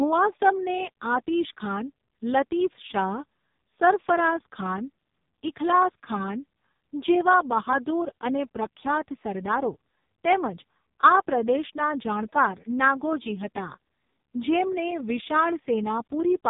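Speech, carried through the AMR narrowband mobile codec for its whole length, with nothing above 3.8 kHz surviving. Heavy codec damage makes the voice buzzy and synthetic, as the pulse-driven vocal-tract model runs short of bits, which fits AMR-NB's lowest 4.75 kbps mode.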